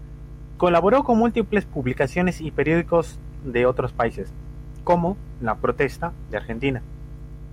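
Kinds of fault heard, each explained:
Mains hum: present throughout, a steady low 50 Hz tone with some low harmonics sitting under the speech at roughly 15 dB below it, the mark of power-line current leaking into the signal path through a ground loop or a nearby transformer.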